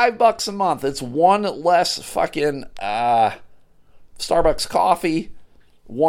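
No technical faults can be heard anywhere in the recording; the speech signal stays intact and continuous throughout.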